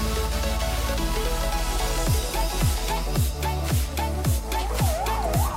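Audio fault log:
0.0–2.92 s, doubled audio track: a slower second capture path is likely feeding the mix, so a copy lands about a second late, around 5 dB quieter, full-band and dry, already running at the start and cutting off abruptly at 2.92 s.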